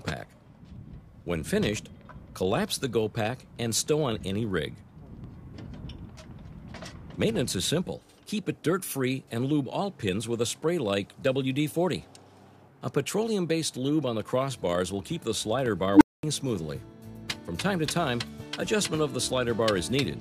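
At 15.66 to 15.68 s a single loud pop lands roughly 10 dB above the sound, which carries on beneath it. Unlike a filter fault it has no pitch, and it is likely an electrical pulse from a plug, switch or static. From 15.93 to 16.23 s an unstable filter produces a tone around 300 Hz that swells over 79 ms and then cuts to 225 ms of silence, a pitched squeal rather than a click.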